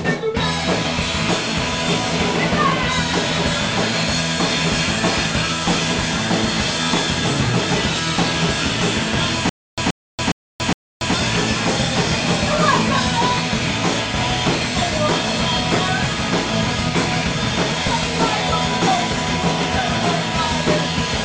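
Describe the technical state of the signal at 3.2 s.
Around 3.2 s the audio is intact, with no audible fault at that point.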